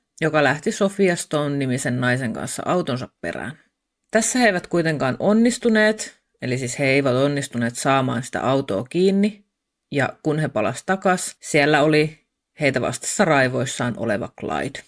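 No audible faults anywhere in the speech recording.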